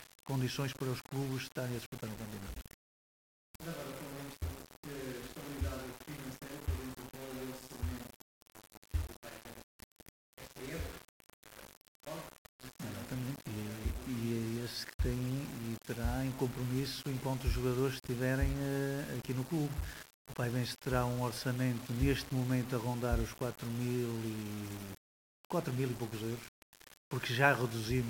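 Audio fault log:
throughout: low bit depth without dither. The audio was likely rounded to very few amplitude steps, fitting about 6 bits, with no dither, so the error follows the signal: grainy distortion only about 15 dB below it, harshest on quiet passages, which turn gritty.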